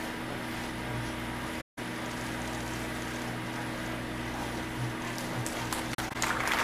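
AAC frame loss with muting at 1.60–1.79 s and 5.94–6.16 s: zeroed frames leave soft-faded gaps, one 171 ms block, then brief scattered dropouts totalling 85 ms.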